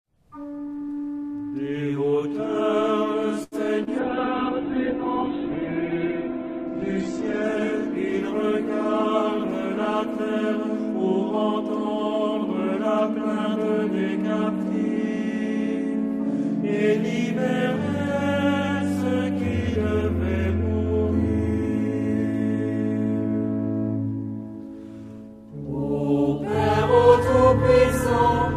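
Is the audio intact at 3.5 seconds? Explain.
No, there's a short stall from a late packet at 3.43 to 3.55 s: the buffer ran dry, so the last sound got held about 84 ms, with a slight buzz or dip, then carried on with nothing lost.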